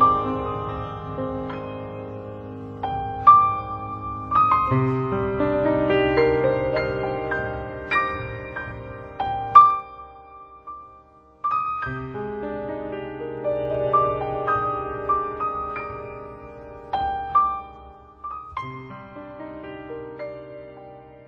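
Zipper noise appears three times, each while the level moves: 9.57 to 9.89 s, a drop of roughly 10 dB in 2 dB steps; 13.33 to 13.89 s, a rise of roughly 10 dB in 1 dB steps; and 17.14 to 18.58 s, a fall of roughly 15 dB. The gain changes in discrete jumps about twenty times a second instead of ramping continuously, and each jump leaves a small click, heard as a ticking rasp over the sound.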